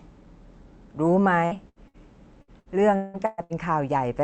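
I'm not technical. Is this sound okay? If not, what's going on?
No. There are two kinds of dropout, both from bits of the call going missing on the way.

First, three separate bursts of packet loss at 1.45–1.54 s, 1.69–1.79 s and 1.88–1.97 s. Each time, the receiving end stretches the last sound for roughly 55 to 70 ms, so it comes out as a brief held buzz or fading hiss. Then about 60 ms of speech is skipped and the voice picks up a little further on. These are short, isolated hiccups.

Second, from 2.42 s to 3.53 s there is repeated packet loss, heard as a robotic sound. Five gaps land close together, the longest 180 ms. Nearly half of that stretch is patched-over guesswork rather than real speech, so the voice turns choppy and pieces are lost. Unlike the earlier bursts, the holes come one after another in quick succession.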